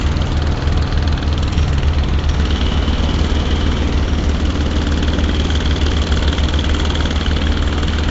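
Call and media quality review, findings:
Rough, hissy halo around the sound, smeared and underwater in texture, plainly audible for the whole clip, with nothing above 7.7 kHz. Likely Nellymoser compression (Nellymoser Asao, the Flash-era microphone codec), at a rate that fits roughly 32 kbps. The codec works on fixed 256-sample blocks with too few bits per sample. Weak bands are dropped and refilled with noise, giving the hiss and smear.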